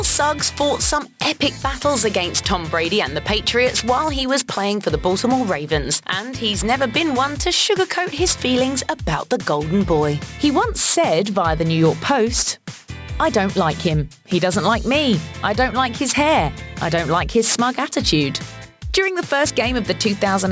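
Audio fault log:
throughout aliasing: gritty, metallic top end, with spurious tones at unrelated pitches and energy running hard up to 8 kHz, roughly 10 dB below the signal. The rate was cut without filtering first, consistent with a drop from 48 kHz to 16 kHz, so content above 8 kHz folds back down.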